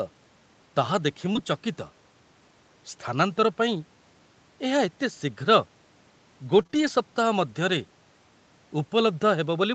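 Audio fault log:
1.33–1.37 s, short concealed packet loss: Right after "ତାହା ଦେଖି" there's a quick smear where about 20 ms of audio didn't make it to the decoder in time. The receiver covered roughly 15 ms of that by carrying the last bit of sound forward, keeping its pitch if voiced or using shaped noise if not, then crossfaded back into the real stream. You hear a tiny wobble rather than a clean dropout.
1.35–1.37 s, lost packet rebuilt from error correction: Overlapping the tail of that same glitch, about 20 ms sounds grainier and noisier than the audio around it. That fits one lost packet being replaced by the low-bitrate backup copy Opus tucks into the following packet. Because that copy was played instead of leaving a hole, there's no gap, just a short rough patch at a coarser quality. Since this Opus stream already tops out at 8 kHz, there's no extra treble dip to notice.
6.59–6.89 s, repeated packet loss (robotic sound): Just before "ସପ୍ତାହ ମଧ୍ୟରେ", this 0.3 s stretch turns choppy. 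Three separate holes, the longest about 20 ms and about 60 ms in total, were each patched by extending the previous sound. The next hole arrives before things settle, so nearly a fifth of the span is concealment, with around a tenth of a second rebuilt overall. Stacked patches like that give the robotic, clipped-off character.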